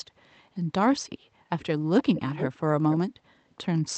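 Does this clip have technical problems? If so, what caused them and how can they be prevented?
Yes. An echo leak puts a 468 ms delayed copy of the speech back into the signal: faint at 1.59 to 1.66 s, nearly as loud as the talker from 1.98 to 2.58 s, and weaker at 2.90 to 2.97 s. This is likely an echo canceller on a loudspeaker end failing to remove its microphone pickup. A headset or better-tuned echo cancellation would prevent it.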